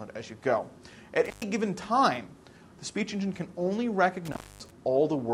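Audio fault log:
1.25–1.43 s and 4.25–4.71 s, intermittent contact: the sound drops out with crackle at each edge, leaving faint hiss for about 116 ms, then about 238 ms. A loose plug or cable briefly breaks the signal path, and the scraping contact causes the crackle.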